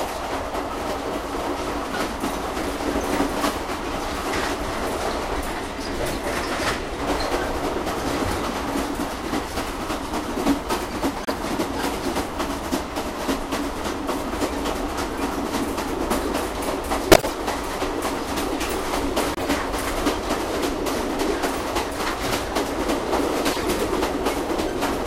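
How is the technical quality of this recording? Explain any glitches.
The recording has five short glitches, all of one type: corrupt frame decoded. They land at 6.06–6.14 s, 11.25–11.31 s, 17.11–17.32 s, 19.35–19.43 s and 23.51–23.69 s. In each case some bits in the compressed data got flipped, but the decoder played those frames anyway. Misread gains and codes push energy into the wrong frequencies, so you hear a brief chirp or noise burst laid over the sound. The short ones at 11.25 and 19.35 s are quick blips. The longer ones at 17.11 and 23.51 s spread across more frames and last about a fifth of a second. The 17.11 s burst is the loudest, peaking around −5 dBFS.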